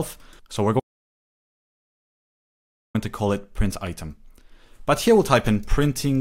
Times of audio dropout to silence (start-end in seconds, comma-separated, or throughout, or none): 0.80-2.95